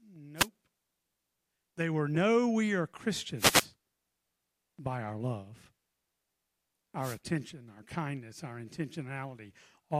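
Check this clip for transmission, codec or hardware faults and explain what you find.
Three wireless microphone noise hits occur, at 0.36 to 0.48 s, 3.37 to 3.67 s and 7.00 to 7.19 s. Each time, reflected copies of the analogue FM radio signal cancel the direct path, so receiver noise surges over the speech as a brief swish of static, up to about 0.3 s long.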